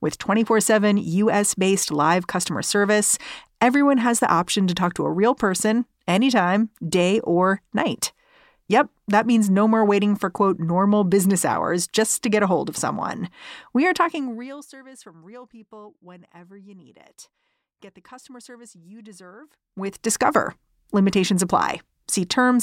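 From 13.97 to 14.72 s, just before "from real people whenever", the level drops by roughly 25 dB with audible zipper noise. The gain moves in small steps, each well under a decibel, at about 100 steps per second, and each unsmoothed step leaves a tiny click, giving a fine buzzy ticking on the speech. The reverse happens from 19.40 to 20.12 s, after "the customer service you", as the level climbs back by roughly 25 dB.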